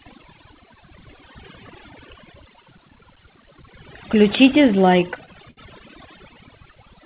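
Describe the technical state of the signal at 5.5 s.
At 5.5 s the speech is inside a run of repeated stalls (stutter) from 4.92 to 5.59 s. The jitter buffer kept running dry, so the last sound was stretched to fill eight brief waits. The longest wait was 63 ms. Nothing is lost, but the speech drags and stutters.

Overdone noise removal also affects this moment, as it does the whole clip. It pulls bands near the noise estimate far down, leaving a lowered, twinkling background. The G.711 A-law call path leaves nothing above 4 kHz.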